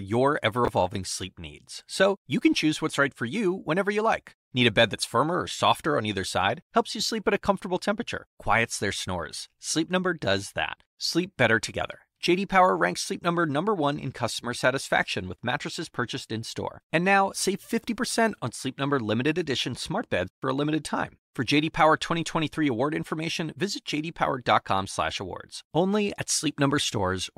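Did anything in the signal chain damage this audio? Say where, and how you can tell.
Yes. The damage sits at the driver or buffer stage, with chunks out of order at 0.65 to 0.68 s in this speech. Over those 30 ms the sound turns briefly jumbled. The pattern fits 10 ms blocks. One block was written two blocks late, so it plays after the two that should follow it. Nothing is missing. The order is wrong, which leaves three hard joins where the waveform jumps.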